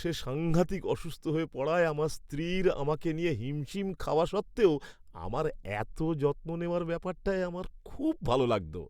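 No audible technical faults.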